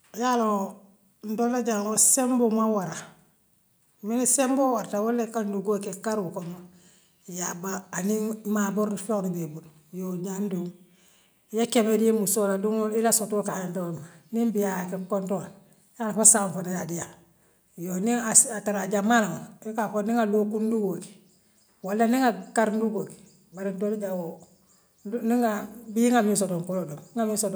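Nothing in this speech recording stood out as a technical problem on listening.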